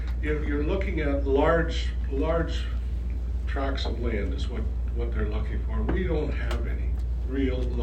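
No technical faults can be heard anywhere in the recording; the signal stays steady and intact throughout.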